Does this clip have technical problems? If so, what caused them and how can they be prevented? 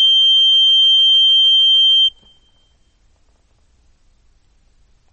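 Yes. Throughout, the music sounds watery and swirly, and nothing is left above 8.4 kHz. This is likely MP3 compression at a bitrate around 32 kbps. A plain low-pass filter would dull the treble without the swirling. Encoding at a higher bitrate prevents this.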